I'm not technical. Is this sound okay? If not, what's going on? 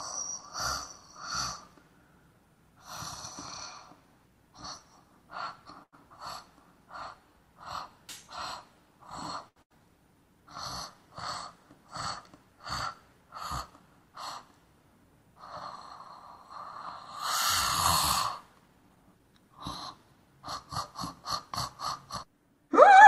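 No. There are three kinds of network playback fault in this clip.

Short stall from a late packet, at 5.83 to 5.95 s and again at 9.49 to 9.58 s: an audio packet arrived late, so the player held the last bit of sound for 91 ms and then 76 ms. Nothing is lost; the sound just hangs briefly.

Burst of packet loss, at 9.62 to 9.72 s, right after the second stall: packets never arrived in time. The player carried the last sound on and faded it for 81 ms, then skipped ahead, so 100 ms of the original audio is gone.

Jitter buffer speed-up, from 18.54 to 19.29 s: the player had built up extra delay and caught up by cutting many tiny slices of sound, about a tenth of a second in all. Playback runs at 113% speed without a change in pitch, which sounds rushed.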